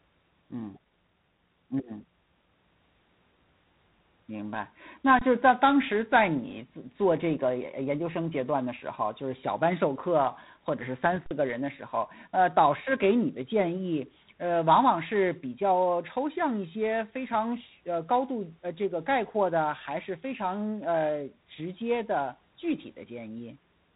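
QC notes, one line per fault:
throughout: G.726 ADPCM at 24 kbit/s, a harsh rasping hiss that tracks speech level from coarse difference coding; spectrogram shows nothing above 3.9 kHz.
5.19–5.21 s and 11.26–11.31 s: underrun with held sample. The waveform goes flat for 23 ms and 46 ms, fitting 1024- and 2048-sample gaps. Roughly 20 ms and 50 ms of live audio were lost.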